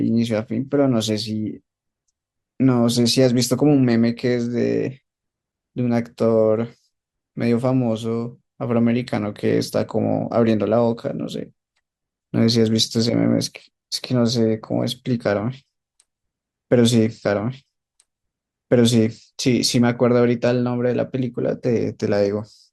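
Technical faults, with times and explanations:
17.22 to 19.22 s, stream segment repeated: a 2-second stretch of speech plays a second time, adding 2 s to the running time. The player fetched or queued the same chunk of the stream twice, so once the first copy finished it jumped back and played that chunk again. The seam where playback returns to the segment's start leaves a small blip, followed by speech the listener has just heard.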